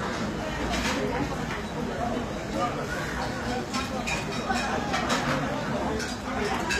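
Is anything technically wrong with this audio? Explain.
Yes. Throughout the clip, the sound shows plainly audible HE-AAC compression, likely from low-bitrate encoding in the range of 24 kbps. Only the lower spectrum is truly coded, and the treble is rebuilt by copying lower bands upward under a coarse envelope, so harmonics no longer line up above the crossover. Nothing reaches past about 14.9 kHz. Unlike a plain low-pass, the top stays bright, but it sounds gritty and metallic rather than dull.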